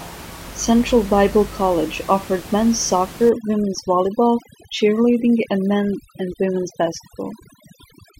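From about 3.3 s, just after "offered men's", to the end at 8.2 s, overdone noise removal takes hold: bands near the noise estimate are cut hard, so the room noise, about 18 dB below the speech before this, drops and breaks up into twinkling specks.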